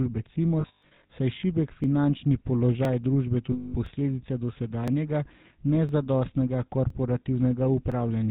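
Speech run through the GSM full-rate codec the whole way, so it's band-limited below 4 kHz with that buzzy, gravelly roughness you get from pulse-driven vocal tract modelling. There are lost GSM frames from 0.6 to 1.1 s, scattered dropouts with the longest run around 150 ms, and again from 3.52 to 3.75 s; the decoder keeps repeating the last good frame at falling level, so you hear a rough metallic ring. On top of that, overlapping chunks cause a tiny stutter every second at 0.83, 1.84, 2.85, 3.86, 4.88, 5.89, 6.90 and 7.92 s, where about 13 ms plays twice at each 1-second chunk join.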